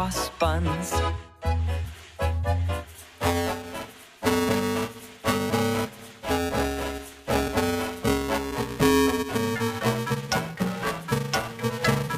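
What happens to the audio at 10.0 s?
At 10.0 s the sound is inside a stretch of buffer tearing that runs from 3.02 s to the end. Writer and reader have slipped, so about two-fifths of each buffer repeats audio a few milliseconds old. That gives a steady robotic 345 Hz buzz, which fits a 128-sample buffer. Unlike random clicks or dropouts, it is pitched, regular, and present only while there is signal.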